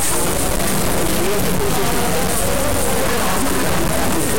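From start to end, the audio shows integer read as float. The 32-bit integer samples are decoded as 32-bit floats. Most become tiny values or huge ones past full scale. The result is a harsh, clipped buzz that collapses to silence when the signal goes quiet.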